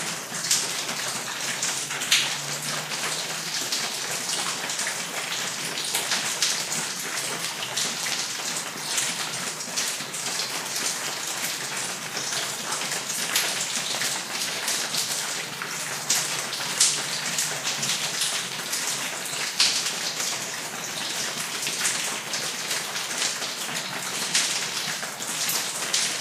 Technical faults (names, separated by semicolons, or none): none